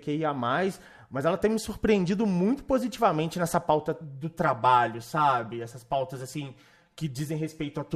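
Speech, and from 4.04 s to the end the sound turns hollow and phasey: a channel delay (comb filtering). One channel arrives around 5 ms late, and when the pair is folded to mono the shared content cancels at regularly spaced frequencies, the first notch near 100 Hz and further notches about every 200 Hz above it. Unlike flanging, these notches stay fixed rather than sweeping, and unlike room reverberation there is no audible tail.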